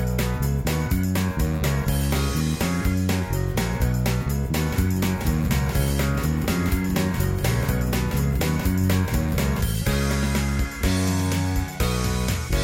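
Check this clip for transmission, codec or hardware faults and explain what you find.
One fault: from 4.71 to 9.61 s, a doubled audio track, with a dry copy around 10 dB quieter trailing about one and a half seconds behind, switching on and off abruptly, likely from a slower second capture path.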